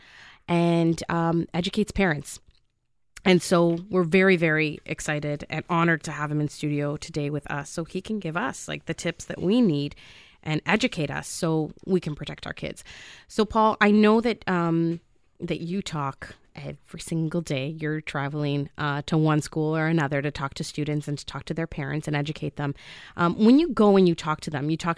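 Nothing in this recording of speech stood out as a technical problem on listening.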